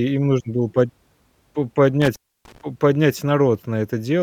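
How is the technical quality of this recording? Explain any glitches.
The recording has one clear technical fault, an intermittent contact between 2.0 and 2.61 s, just before "по поднять". A loose plug or cable connection briefly separates and reconnects, so the signal path opens for roughly 0.29 s within that stretch. The speech drops out abruptly, with crackle at the moments the contact breaks and remakes, and during the gap faint hiss remains before the sound snaps back.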